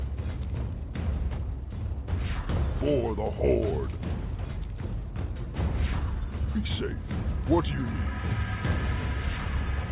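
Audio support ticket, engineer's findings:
No faults found; the signal carries through a call path with nothing above about 4 kHz, a telephone-band limit that fits a G.711 codec at 64 kbps, with its usual coding noise.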